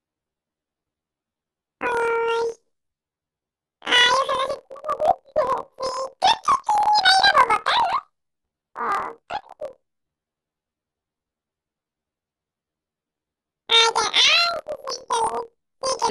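Throughout, planar audio is read as interleaved. Each 26 ms block plays twice at double speed, one octave up, giving a robotic buzz near 38 Hz.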